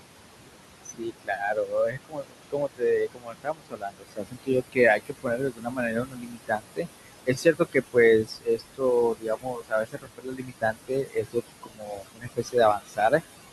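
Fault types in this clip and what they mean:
noise suppressor artifacts: Across the whole clip the suppressor pushes the room noise, which sits about 10 dB under the speech, down by about 20 dB in the gaps and lets it rise again beneath the speech.
speech cut by the noise suppressor: In eight stretches between 0.84 and 13.21 s, soft speech parts are judged as noise and pulled down by about 20 to 22 dB. They sound swallowed or faint rather than silent, which distinguishes this from an abrupt dropout.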